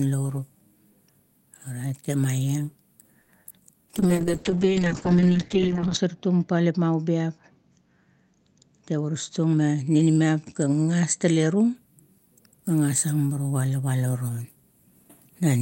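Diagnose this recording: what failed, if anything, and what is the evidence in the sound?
At 3.21 to 3.30 s the jitter buffer ran dry while a late packet was awaited. The last sound is held for about 70 ms and then resumes from the same point, with nothing lost. That held, slightly buzzy sustain, rather than a gap, marks it as a short stall from a late packet.

Right after, at 3.44 to 3.47 s and 3.49 to 3.52 s, two short concealed packet losses occur at the network stage. In each, roughly 20 ms of audio never arrived and was bridged by extrapolated sound, giving a brief smear or wobble. Unlike the stall, real material is missing here.

From 3.98 to 11.81 s the call bitrate drops from 32 to 6 kbps, bottoming out for about 2 s. The codec narrows from 20 kHz to 8 kHz bandwidth, so the sound turns muffled and watery. It is a sustained loss of detail, not a momentary glitch like the losses.

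Between 9.02 and 9.75 s a jitter buffer speed-up plays the audio at about 109% by cutting pitch-period slices, removing about 70 ms in total to shrink the built-up delay. The pace sounds hurried while the pitch stays put, which separates it from a resampling or clock-rate error.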